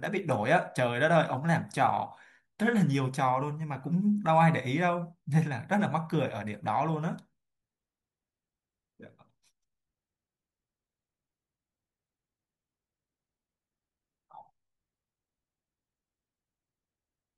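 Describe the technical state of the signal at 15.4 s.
At 15.4 s the speech signal is intact, with no technical fault present at that moment.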